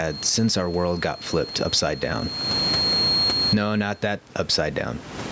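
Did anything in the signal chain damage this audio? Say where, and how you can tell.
Yes, there's gain pumping all the way through this speech. The level swings by something like 25 dB. Loud and quiet passages end up squashed closer in level. The likely cause is microphone gain set far too high at the input stage, with a fast limiter or compressor clamping down on each loud sound and letting go in the gaps.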